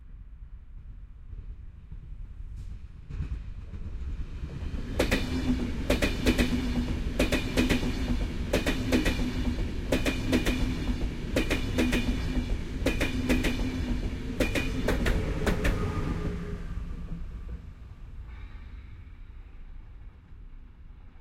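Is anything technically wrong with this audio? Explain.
Yes. At 15.49 to 15.51 s there is a single loud pop, a sharp click that peaks roughly 10 dB above the surrounding audio, which carries on underneath without a break. The likely cause is a sudden electrical step or spike, from a plug being seated, a switch, a static discharge or a driver glitch, that gets added straight onto the signal. The stages after it smooth that spike into a short burst heard as a pop.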